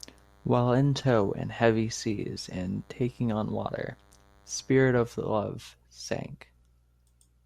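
A thin, steady buzz sits faint beneath the speech from 0.0 to 5.22 s: DECT cordless phone buzz, radio bursts every 10 ms rectified into a 100 Hz hum.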